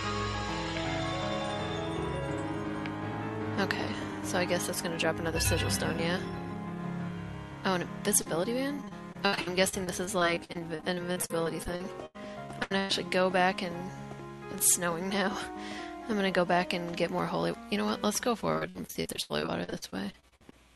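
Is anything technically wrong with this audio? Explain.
Yes. The audio has packet-loss faults from a call connection.

A short concealed packet loss occurs at 8.21 to 8.27 s. About 40 ms of audio never arrived in time. The receiver filled the hole by extending the preceding sound, carrying its pitch forward if tonal and using shaped noise if not, then faded back into the real signal. It is heard as a brief smear or wobble, and a very short sound there can disappear.

Repeated packet loss, heard as a robotic sound, runs from 8.76 to 12.91 s and again from 18.53 to 20.54 s. Holes keep appearing, the longest about 108 ms in the first stretch and 83 ms in the second. About a quarter of the first stretch and about a third of the second is patched-in audio. Each patch extends the last sound before the next hole arrives. The result is choppy, with pieces missing.

Beneath this, the sound has the coding character of a call codec, with the top end rolled off above roughly 12 kHz.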